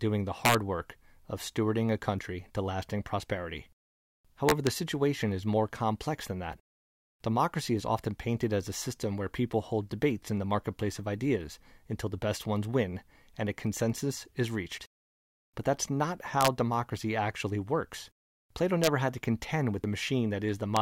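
Violent, hard cracks break through loud moments of this speech clip at 0.45–0.55 s, 4.49–4.67 s, 16.41–16.48 s after "that's not", 18.84–18.87 s just before "had to contend", and at 20.77 s. This is integer overflow: peaks pushed only about 1 to 3 dB past the limit wrap to the opposite sign instead of being held. Short chirps or blips also occur at 6.53 s, 10.8 s, 17.0 s just before "actually works", and 19.84 s. These are damaged data in the compressed stream, where the decoder misreads corrupted frames, loses sync and searches for the next frame header.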